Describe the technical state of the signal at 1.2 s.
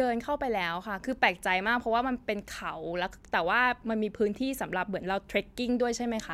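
The signal at 1.2 s is intact, with no audible fault at that moment.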